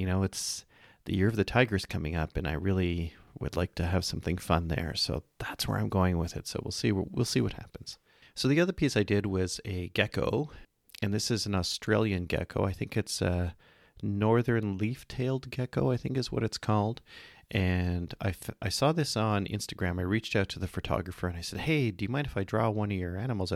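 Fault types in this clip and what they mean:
No faults detected in this speech recording.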